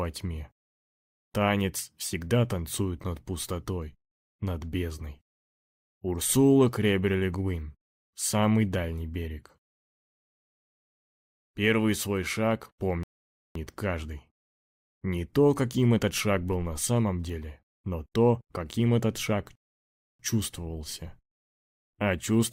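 A rebuffering stall occurs at 13.03 s, where the sound drops to silence for 0.52 s before picking up exactly where it left off, and a second at 19.55 s adds 0.64 s of silence. In each case the player exhausted its store of downloaded audio and had to wait for more data to arrive. No material is skipped or repeated; the gaps simply insert dead time, stretching the playback by just over a second in total.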